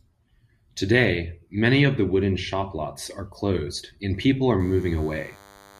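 From 4.60 s to the end of the clip, a DECT cordless phone buzz sits under the speech. A nearby DECT handset or base station is sending short radio bursts every 10 ms. The audio circuit rectifies them into sound. The result is a steady, thin buzz at 100 Hz, rich in harmonics. It stays about 25 dB below the speech. It is a rasping hum that does not fade.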